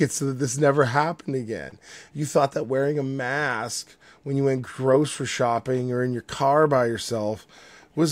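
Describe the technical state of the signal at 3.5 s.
At 3.5 s the speech signal is intact, with no fault present at that moment.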